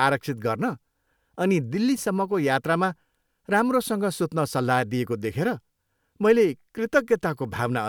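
A short bit of speech, and nothing technically wrong turns up anywhere in it.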